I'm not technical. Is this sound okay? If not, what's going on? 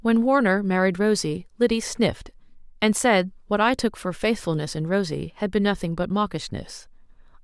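Yes, this speech recording has no technical faults that can be heard anywhere in it.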